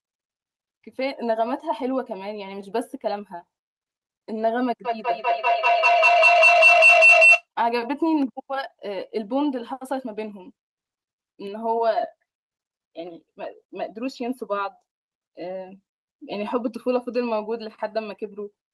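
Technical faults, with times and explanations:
4.85 to 7.47 s, feedback howl: a tone near 3 kHz swells to about 10 dB above the speech, pulsing roughly five times a second; unlike echo, each loop trip grows louder.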